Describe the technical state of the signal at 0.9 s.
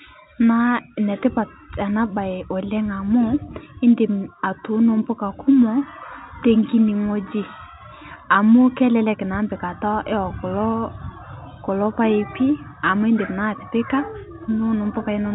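At 0.9 s the speech is intact, carried through ordinary G.711 telephone coding with its usual band limit near 3.8 kHz and no fault at that moment.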